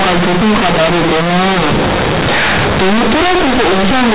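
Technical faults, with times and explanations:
Throughout, companded audio read as linear. The speech was coded as A-law but the bytes are played as plain linear 8-bit samples, never expanded. Every sign change swings the output across about half its range. Quiet parts become as loud as peaks. The result is harsh, buzzy distortion with heavy noise in the pauses.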